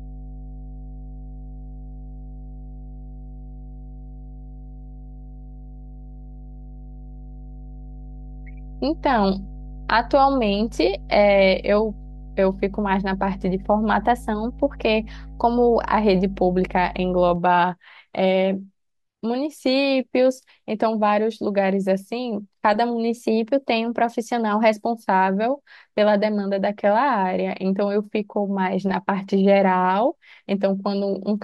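From the start until 17.36 s, a steady mains hum sits under the speech. It is a low tone at 50 Hz, with some low harmonics above it. It is loud, roughly 15 dB below the speech. A ground loop or a nearby transformer has let the power line leak into the signal. The hum stops at 17.36 s.

From 14.02 to 15.93 s, the speech suddenly runs fast and high. It speeds up by 5.76 percent and rises 96.9 cents, close to a semitone. Then it snaps back. The same jump happens again from 23.14 to 24.74 s, with identical values. Speed and pitch move together, so the speech does not just sound higher. It sounds hurried and detuned at once. This is likely a drift correction step, where clock-matching software changed the playback rate in one jump to rebalance its buffer.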